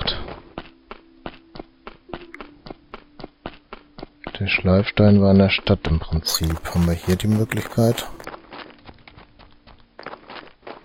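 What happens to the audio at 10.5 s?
Nothing goes wrong at 10.5 s; the audio plays through that moment intact.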